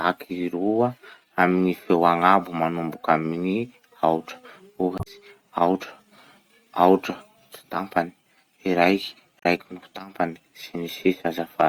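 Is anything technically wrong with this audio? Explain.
Yes, there's damaged data in the compressed stream at 4.95 to 5.07 s and 9.39 to 9.46 s. The decoder misreads corrupted frames, loses sync and hunts for the next header, leaving brief glitches in the speech.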